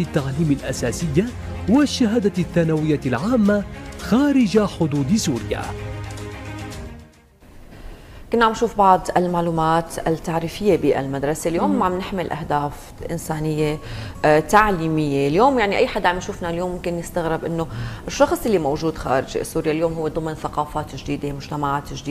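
No technical faults can be heard anywhere in this clip.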